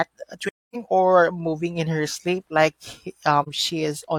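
At 0.48 to 0.76 s and again at 3.42 to 3.47 s, the speech falls into AAC frame loss with muting. The decoder zeroes the missing spectrum, so the speech fades out and back in. The first hole of about 256 ms fits six lost frames, the second about one. It differs from a hard dropout because its edges fade rather than cut.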